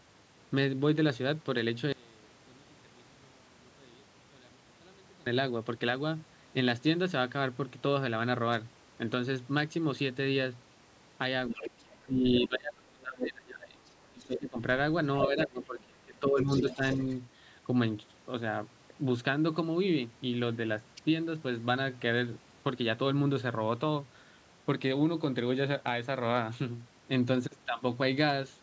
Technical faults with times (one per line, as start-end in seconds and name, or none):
1.92-5.26 one channel inverted
11.49-14.58 speech suppressed in double talk
11.61-12.47 other side's voice leaking through
13.86-14.39 other side's voice leaking through
15.22-15.66 other side's voice leaking through
15.27-16.82 speech suppressed in double talk
16.40-17.15 other side's voice leaking through